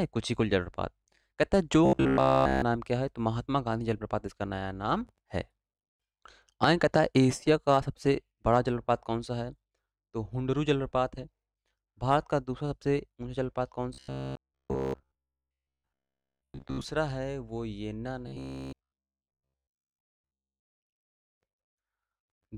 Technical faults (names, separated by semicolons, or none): robotic sound from repeated short buffers